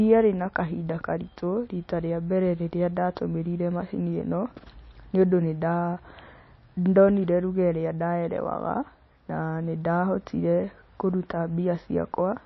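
Right through, the speech stops dead at 5.8 kHz and sounds watery and swirly, likely MP3 compression at a starved bitrate around 26 kbps.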